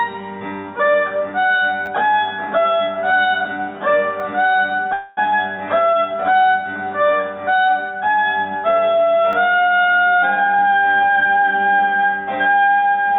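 At 1.86 to 1.88 s there's a repeated buffer: new audio didn't reach the device in time, so it replayed the last chunk twice more. Each piece is tiny, which fits a 10 ms buffer, so rather than a clear stutter you get a quick buzzy click with hard joins. The same thing happens again at 4.2 s and at 9.33 s, each time with a single extra play. Since the repeats just hold the place of late audio, nothing seems to drop out.

From 4.93 to 5.19 s there's a call audio freeze. The jitter buffer likely ran dry because packets were held up in transit, so the receiver kept extending the last bit of sound as a fading buzz for about 240 ms instead of going silent. When the audio picks back up, it resumes right where it stopped with nothing missing. Everything after that point arrives roughly 240 ms later than it would have. The band-limited, telephone-like sound throughout, with nothing above 4 kHz, is just the call path's codec, which sounds like G.711 A-law.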